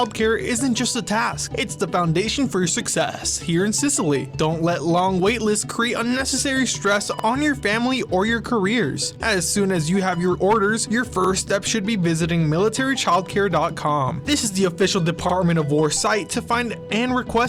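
At 3.14, 7.19, 11.24 and 15.29 s there are overlapping chunks: the audio was handled in 4-second blocks, and each block begins 50 ms before the previous one finished, so that 50 ms slice plays twice at every join. The result is a brief stutter or click recurring at roughly four-second intervals, each one the same short repeat of the sound just heard.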